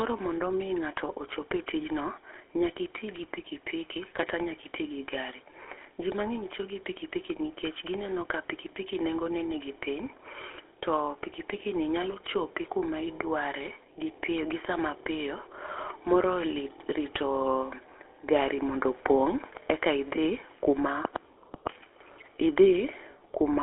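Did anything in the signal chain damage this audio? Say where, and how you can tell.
Yes, at the codec stage, throughout the speech: the GSM full-rate codec. The voice has a buzzy, gravelly roughness, plainly audible from start to finish, and the sound is confined to a telephone band of about 300 Hz to 3.5 kHz, consistent with a 13 kbps GSM full-rate stream. A spectrogram would show nothing above 3.8 kHz and smeared, grainy harmonics, because the codec models the vocal tract and drives it with a sparse, regularly spaced pulse excitation.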